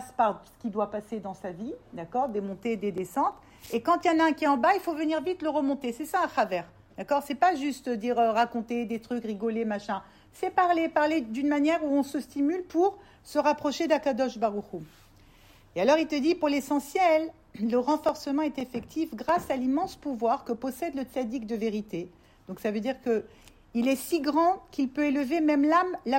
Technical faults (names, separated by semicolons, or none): CD scratch ticks